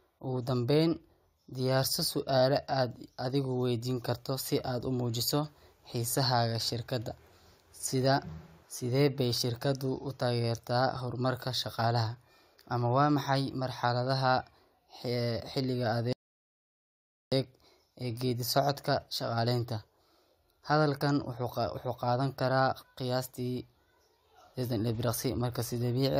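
At 16.13 s a rebuffering stall halts the speech for 1.19 s of silence. Unlike a dropout, it resumes exactly where it stopped, losing nothing.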